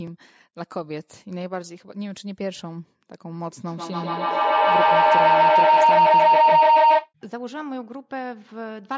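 At 3.64 s a feedback howl kicks in and runs to 7.13 s. Two devices in the same room are feeding each other, each lap round the loop adding level, so it narrows to a tone near 1 kHz, pulsing roughly every 150 ms and peaking about 15 dB above the speech.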